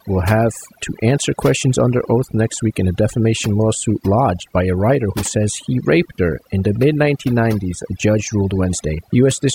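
Speech marred throughout by overdone noise removal: bands near the noise estimate are cut, leaving twinkling specks over a lowered background, unlike a gate's abrupt on-off switching.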